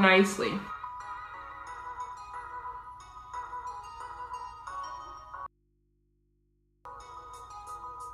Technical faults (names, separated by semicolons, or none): audio dropout to a faint residue